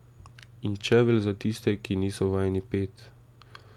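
Nothing in this bit of speech stands out as a technical problem; it just runs along without anything catching the ear.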